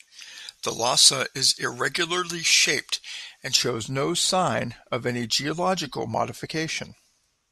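From the start to about 3.56 s, just before "no sign of any", there's pre-emphasis left on. The treble got boosted, in a way that fits a J.17-style curve, and the matching cut never happened. That leaves 10 kHz about 11 dB hot against 1 kHz, so the speech comes across thin, bright and sibilant.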